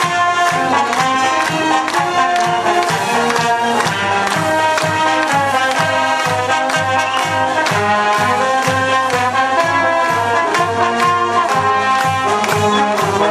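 No technical faults can be heard anywhere in the recording; the signal stays steady and intact throughout.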